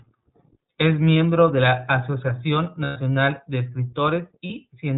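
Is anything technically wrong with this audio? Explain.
Yes. The speech has been through the iLBC codec throughout, and the decoding is plainly audible. Everything above 4 kHz is gone, and each frame's excitation is coded on its own, giving a slightly rough, synthetic edge consistent with the 15.2 kbps, 20 ms frame mode.

There are lost iLBC frames at 1.14–1.16 s, 2.84–2.99 s and 4.46–4.51 s, gaps that fit one, six and two missing 20 ms frames. The decoder fills each one by repeating the last pitch cycle mixed with noise, so it sounds like a held, buzzy vowel. The 120 ms gap fades. Speech returns almost immediately afterwards.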